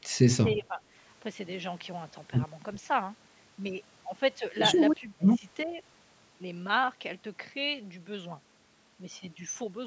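An echo canceller likely treated overlapping talk as echo, leaving speech suppressed in double talk: the speech dips by roughly 10 to 20 dB at 0.05–0.23 s, 0.53–0.82 s, 5.0–5.45 s and 5.65–5.8 s.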